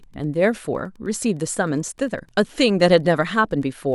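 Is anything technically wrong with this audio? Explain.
Yes. Wi-Fi interference runs throughout this speech clip: a nearby Wi-Fi radio's beacon, repeating every 102.4 ms, is being rectified by the audio circuit, so a steady faint ticking about ten times a second sits well below the speech, roughly 40 dB down.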